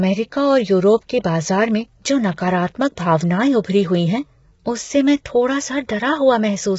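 From start to finish the speech sounds rough and grainy, noise filling the gaps between harmonics, nothing above 7.7 kHz; likely heavy low-delay AAC compression, consistent with AAC-ELD near 16 kbps.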